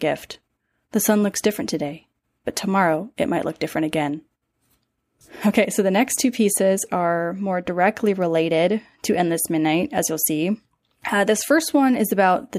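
No technical faults can be heard anywhere in the speech recording. Nothing in it calls for a timestamp or a closer listen.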